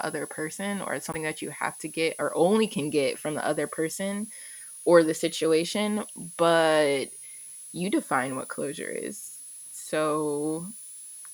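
From the first moment to the end, a thin high whistle sits under the speech. This is a switching supply whistle: a power supply running in an audible burst mode, or beating against another supply, and leaking its tone into the audio path. Its pitch wanders between 9.93 and 10.42 kHz, around 10 kHz, at roughly 15 dB below the speech. On a spectrogram it is a slightly wavering horizontal line near 10 kHz spanning the whole clip.

At 1.11 s, between "other person or it's" and "that you have to", the audio lurches forward and a garbled fragment lasting until 1.16 s, about 44 ms, takes the place of the expected continuation. The likely cause is a broken MP3 bit reservoir. Frames were lost, and the next frame reached back into earlier frames for its borrowed data and decoded bytes that belonged to a different frame. The span covers under two frames, which fits frames of about 26 ms. A spectrogram shows a short smeared or broadband patch breaking the speech pattern, and the waveform shows a discontinuity where the signal jumps.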